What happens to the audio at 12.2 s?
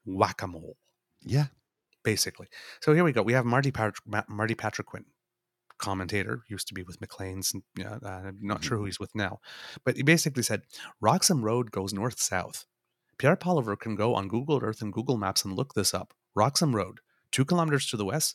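Nothing goes wrong at 12.2 s; the speech carries straight through that moment without any dropout, click, distortion or other audible fault.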